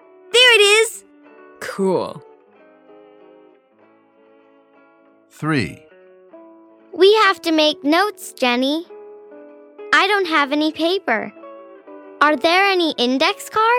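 No technical faults can be heard anywhere in this audio, and the signal holds steady throughout.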